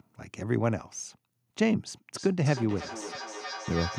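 A speech clip with feedback echo between two devices, starting at 2.15 s and running to the end. The speech comes back round at a steady interval of roughly 300 ms, peaking about 12 dB below the direct sound. Two devices in the same room share the call: one plays back what the other's microphone sent, that mic hears it again, and each echo canceller only removes its own device's playback, so the loop carries through.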